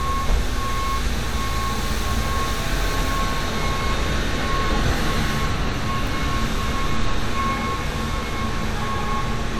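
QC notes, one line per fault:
No faults detected on this sound clip.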